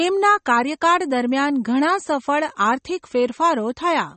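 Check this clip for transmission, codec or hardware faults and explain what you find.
One codec fault runs through the whole recording: MP3 compression, likely encoded at a starved bitrate that fits about 32 kbps. The encoder removed everything above 8.4 kHz and zeroed weak frequency lines frame to frame, so the speech sounds dull and plainly watery, with swirling artefacts.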